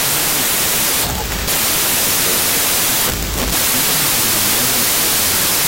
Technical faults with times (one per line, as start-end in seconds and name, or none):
0.00-5.67 wrong sample width